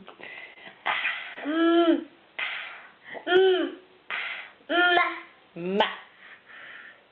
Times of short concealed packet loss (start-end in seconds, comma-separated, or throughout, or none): 0.53-0.58, 1.34-1.38